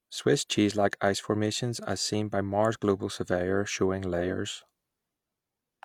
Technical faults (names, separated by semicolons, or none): none